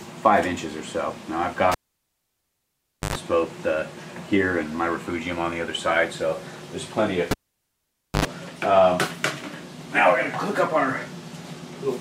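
Someone pulled and plugged the cable back in twice, at 1.72–3.15 s and 7.31–8.25 s: a pop, near silence for about 1.4 s and 0.9 s, then a brief 50 Hz buzz (110 ms, 83 ms) as the tip touches, and another pop.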